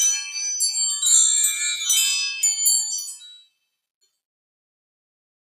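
A noise suppressor built for speech is applied to this sound from start to finish. It treats steady parts as noise and pulls them down. Attacks get through, but held parts and tails keep sinking. The level swings by roughly 5 dB as the processing works. The result is pumping and flutter, and a thinner body than the sound should have.

From 2.84 s the clip carries truncation distortion on a fade. A smooth fade-out begins there and runs to the end at 5.51 s. But the gain stage keeps too few bits and adds no dither, which fits roughly 9-bit resolution. As the level drops, the waveform collapses into coarse steps. From 3.14 s to the end the tail turns gritty.

Between 3.01 s and 3.66 s comes the worst damage from the noise suppressor. It takes this passage for noise and cuts it harder than the rest. The drop reaches about 20 dB at its deepest. The affected stretch lasts about 0.7 s. The steady body of the sound sinks sharply and its decay is cut short. 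This stacks on the start of the fade and hollows that stretch out.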